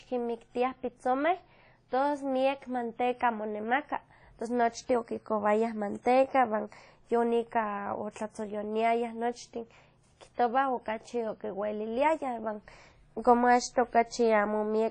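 Right through the speech there's plainly audible transform-codec damage, likely from WMA compression at a low bitrate, around 32 kbps. Quantisation noise smears across long blocks, so the sound rings and washes, with hiss breathing along, and nothing survives above about 10.1 kHz.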